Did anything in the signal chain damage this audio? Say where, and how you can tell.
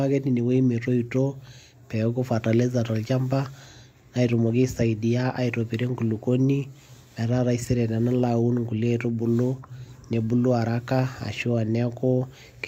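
No, no stage in the chain has left any audible damage on this speech recording.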